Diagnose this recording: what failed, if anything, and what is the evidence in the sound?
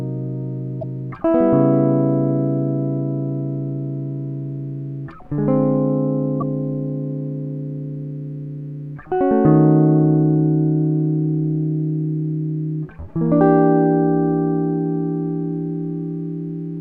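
At the codec stage, the likely cause is a broken MP3 bit reservoir: after frames dropped out, the next frame reached back for borrowed data and decoded the wrong bytes. The music skips ahead with a brief chirp, burst of noise or short hole at 0.81–0.83 s and 6.40–6.43 s, each about one 24 ms frame long.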